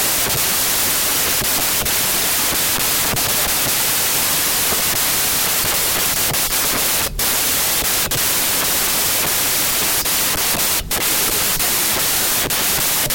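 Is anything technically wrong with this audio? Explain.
Yes. Throughout, the speech is buried in loud, harsh noise and plays 1.5 times too fast and high, because 16-bit samples are being read as packed 24-bit ones, a wrong sample width.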